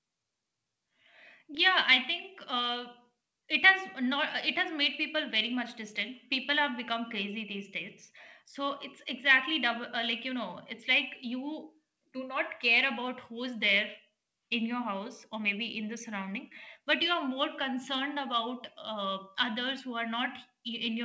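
Nothing in this speech goes wrong: it just sounds like an ordinary wideband call, with the top of the spectrum stopping at about 8 kHz as you'd expect from a G.722-style codec and the usual microphone processing trimming the lowest bass.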